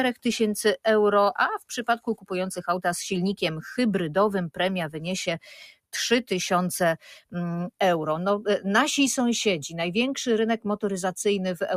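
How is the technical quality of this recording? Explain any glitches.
One glitch stands out. From 1.99 to 2.3 s, the sound is cut by the noise suppressor. It mistakes the sound for noise and pulls it down by up to about 15 dB, for around a fifth of a second in total. Unlike a dropout, nothing goes fully silent. The steady part sinks and any tail is clipped short, while sharper onsets survive.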